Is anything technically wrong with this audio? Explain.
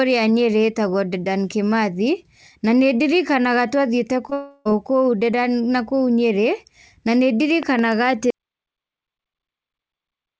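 Yes, the recording has four faults, all from the middle of the speech onward.

Short concealed packet loss, 4.30 to 4.33 s, just after "ndirikanaga twathiĩte": a few tens of milliseconds of call audio reached the decoder too late to play, so the receiver patched the gap by extending the preceding sound, from its pitch where voiced and as shaped noise otherwise, before crossfading back. Here that fill lasts only about 13 ms against roughly 20 ms lost, heard as a tiny smear at the start of the trouble.

Long network dropout, 4.33 to 4.67 s, immediately following: the stream then stopped arriving altogether, most likely from a network stall, and the receiver kept synthesising from the last sound for the whole 320 ms rather than falling silent. This stretch comes out as a buzzy, fading continuation of the previous sound, and when real audio resumes the 320 ms of speech that should have been there is simply missing.

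Loud pop, 7.63 to 7.81 s, right after "na nĩ": a sudden voltage step or pulse, likely from a connector, switch or driver glitch, was added to the signal. It arrives as two sharp pops in quick succession, peaking a few decibels above the speech, with the speech continuing underneath them.

Audio dropout to silence, 8.30 s to the end: the input was lost, likely through a disconnect or mute, while recording carried on writing silence. The speech cuts off mid-flow into silence with no room tone, and nothing after that point survives. Throughout, the call path's upper limit near 8 kHz is audible as a dulled top end, which fits a wideband codec such as G.722.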